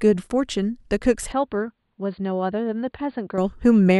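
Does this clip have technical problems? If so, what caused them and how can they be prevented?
Yes. From 1.32 s to 3.38 s the input was likely switched to a poorer device that passes nothing above 4.6 kHz. The speech turns dull and boxy, drops about 5 dB in level and picks up a faint new noise floor, with no gap at either switch. Fixing the recording to one chosen microphone and turning off automatic device or headset-profile switching prevents this.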